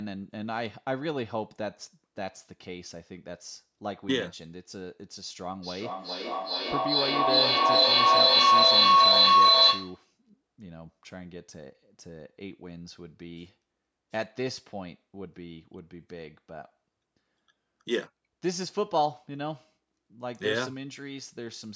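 Feedback howl, 5.63 to 10.12 s: a microphone-loudspeaker loop gains level each pass, building a tone around 1 kHz, pulsing roughly every 0.4 s, about 13 dB above speech.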